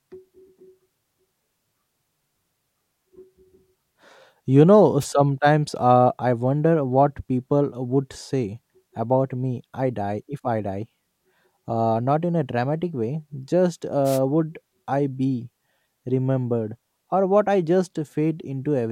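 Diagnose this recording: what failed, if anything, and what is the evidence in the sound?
The failure is in the analogue radio link of a wireless microphone, ahead of any conversion: two wireless microphone noise hits, a brief swish of static at 5.00–5.06 s and a longer one at 14.04–14.19 s, between "a dramatic way just" and "would I be remembered". Reflections cancelling the FM carrier let receiver noise rise over the speech. A spectrogram shows short broadband vertical smears of hiss, and the waveform shows brief noisy bursts.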